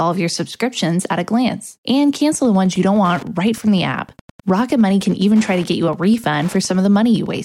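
Wi-Fi interference runs from 2.31 s to the end of the audio: a steady ticking about ten times a second, roughly 25 dB below the main signal, as a nearby Wi-Fi radio's 102.4 ms beacon bursts are picked up and rectified by the audio circuitry.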